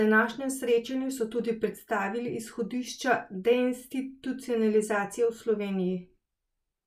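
No technical faults can be heard at any point in the speech.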